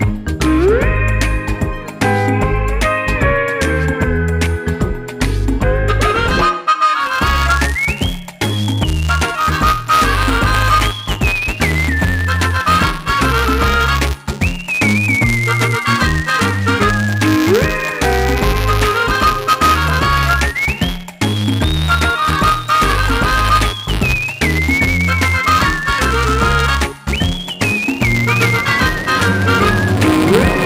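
From 7.00 s to the end at 30.65 s, buffer tearing sets in: the writing side and the hardware reading the ring buffer have drifted so they cross inside each period. A small sliver of every buffer carries audio from about ten milliseconds earlier, spliced in with hard edges. The result is a steady robotic buzz near 188 Hz, which fits a 256-sample buffer. Unlike scattered dropout clicks, it repeats at a fixed rate and vanishes in silence.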